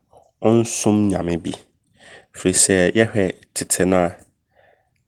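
Nothing goes wrong in this speech clip; it runs through Opus voice compression in its hybrid mode, keeping the full band in a way that fits a bitrate of around 20 kbps, and there's no fault to point to anywhere along the way.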